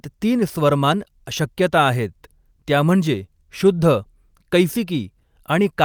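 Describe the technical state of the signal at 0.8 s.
At 0.8 s the speech signal is intact, with no audible technical fault.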